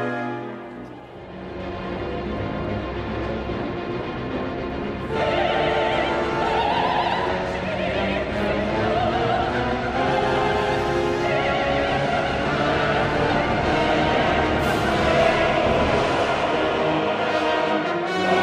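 No technical faults can be heard anywhere in this audio. Nothing in it needs a timestamp or a fix.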